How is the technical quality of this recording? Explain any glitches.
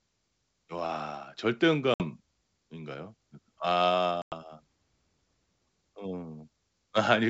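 Two short dropouts break up the speech. The wideband coding itself adds no audible damage. These gaps are packet loss on an ADPCM call. At 1.94 s about 60 ms vanishes, and at 4.22 s about 100 ms. Each hole cuts in abruptly. The decoder's predictor then loses sync, so speech resumes with brief distortion.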